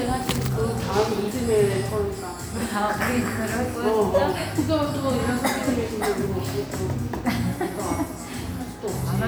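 Nothing technically wrong turns up in this recording of everyday sounds, so there's no fault to point to at any time and no cause to trace.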